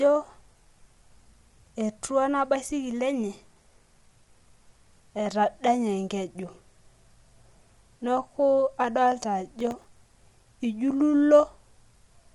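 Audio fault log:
throughout, low-delay AAC compression: rough, grainy speech with noise between harmonics and nothing above 11.6 kHz, likely from AAC-ELD at a low bitrate, around 32 kbps.
9.60–10.41 s, processor overload crackle: a gritty tearing burst as many very short buffers, around a millisecond and a half each, missed their deadlines and replayed stale audio with hard edges.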